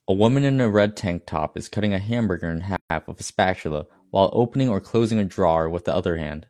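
Speech, with a gap at a join of encoded pieces at 2.76 to 2.90 s: 137 ms of silence after "cutting a hamburger in", then "with a spatula while" resumes where it stopped. Unlike a dropout, nothing is lost.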